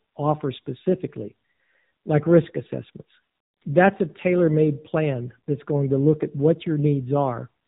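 From start to end, the speech passes through an AMR narrowband mobile codec. Nothing above 3.8 kHz survives, and the low bitrate, likely 7.4 kbps, leaves the voice plainly buzzy and synthetic.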